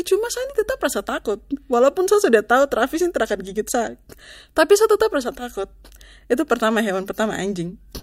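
Speech recording, no technical faults detected on listening.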